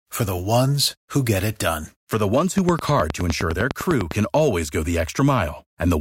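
From 2.58 s to 4.12 s, just after "the ones" and ending before "always go the", a train of clicks runs over the speech: around fifteen sharp, near-identical ticks at a steady 9.8 per second, standing out by about 15 dB and audible between syllables as well. The regular spacing and matching shape set it apart from random crackle or a single pop, and most likely point to interference from nearby equipment or a faulty connection or power supply.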